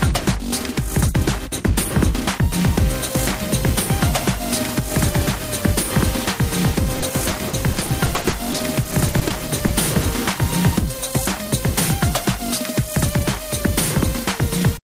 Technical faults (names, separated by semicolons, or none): repeated packet loss (robotic sound)